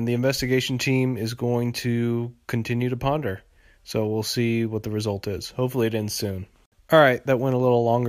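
No technical faults can be heard anywhere in the speech recording, and the signal stays steady and intact throughout.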